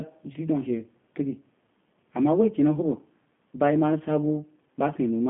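From start to finish the speech sounds narrow, slightly rough and synthetic, with nothing above about 3.7 kHz: G.729 codec coding at 8 kbit/s, rebuilding the voice from a filter and sparse pulses.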